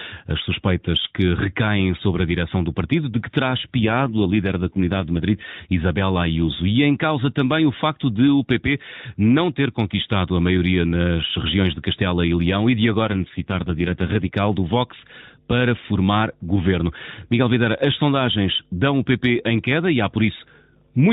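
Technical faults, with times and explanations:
3.80–5.22 s and 13.06–14.35 s, AMR rate drop: right after "partido de que terá", and again later, the speech turns buzzier and more synthetic, which fits the mobile codec stepping down from 12.2 to 5.9 kbps. The same 4 kHz narrowband ceiling and unbroken flow rule out packet loss or a bandwidth switch.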